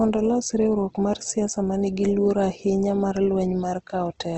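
From start to end, the speech carries plainly audible codec damage. The top is cut, with nothing above 8.4 kHz. Tones sound grainy, rough and noisy rather than swirly. The likely cause is Opus compression at a low rate, which fits roughly 16 kbps in its CELT mode. Bits run short, so bands are filled with folded or noise content. That keeps the energy but loses the detail.

From 0.26 s to 4.25 s come faint, regular ticks. They repeat about every 0.15 s, around thirty in all. These are clock slip clicks. Two devices likely run on unsynchronised clocks that differ by something like 150 ppm. Each time the drift adds up to a whole sample, one sample is dropped or repeated. That single-sample jump makes each tick.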